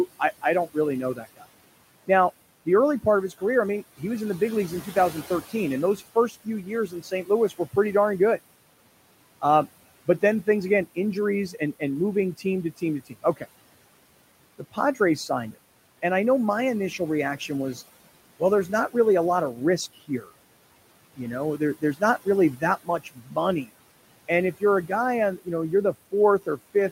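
Noise suppressor artifacts run throughout the speech. The suppressor pulls the steady room noise, which sits about 19 dB under the voice, down by about 18 dB, so it sinks between phrases and rises underneath them. Speech cut by the noise suppressor occurs at 0.19 to 4.01 s, at 4.95 to 7.77 s after "the big leagues in" and before "darn good", at 9.42 to 13.43 s, at 14.59 to 16.03 s, at 16.98 to 23.69 s after "and I know my" and before "and if", and at 24.6 to 26.92 s after "and if". In these stretches the suppressor mistakes quiet syllables for noise and drops them by up to about 17 dB, so they sound swallowed.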